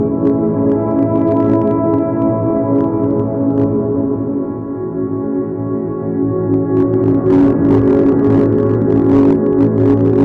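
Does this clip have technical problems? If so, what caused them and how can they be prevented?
Yes, there's hard clipping running through the whole clip. The sound was driven roughly 7 dB past what some stage in the chain could pass, so the loudest peaks got sliced flat. Only a small share of samples, around two percent, actually hit the ceiling, but those squared-off tops throw extra harmonics way up the spectrum, which is the crackly edge you hear on the louder sounds. To prevent it, set gain so peaks sit well below full scale before recording or converting.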